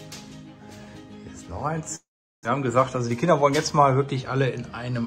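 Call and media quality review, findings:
Long network dropout, 1.95 to 2.47 s: audio gap, likely from lost packets. Receiver extends last sound as fading buzz or hiss, then about 380 ms near-silence. Roughly 0.4 s of content never returns; playback resumes later in stream, shifted by roughly 70 ms.

Jitter buffer speed-up, 2.79 to 3.71 s: audio runs about 7% fast at unchanged pitch, sounds hurried. Receiver draining excess buffered audio by cutting short pitch-period segments repeatedly, roughly 70 ms removed in total.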